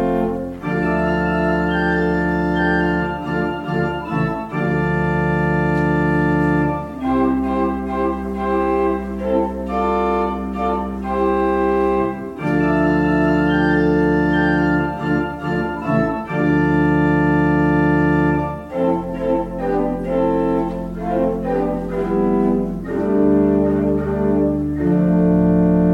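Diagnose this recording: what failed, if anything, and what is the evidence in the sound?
Nothing failed in this recording, and there is no evidence of a fault anywhere in the sound.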